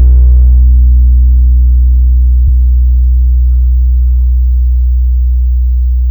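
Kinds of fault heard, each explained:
MP3 compression: The encoder, likely an MP3 stage, ran short of bits and kept only the frequency lines its hearing model ranked as important. It dropped weaker lines, which flicker in and out from frame to frame. Throughout the clip the damage is plainly audible as a watery, swirling texture with smeared attacks, which fits a low bitrate around 64 kbps.
Hard clipping: For the first 0.68 seconds, from 0.00 s, the signal was slightly larger than a stage in the chain could pass, and its peaks were flattened. The overload is small, about 1 dB, so only the highest peaks are shaved. Those flat tops add harmonics high in the spectrum, heard as a light crackle or edge on the loudest moments at the start rather than a constant fuzz.
Repeated frames: At 2.47 to 2.50 s, one compressed block of 26.1 ms was written or sent twice, which points to a single MP3 frame. 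The decoder played the same slice of sound again, causing a brief stutter. Because of the repeat, the clip runs 26.1 ms longer than it should.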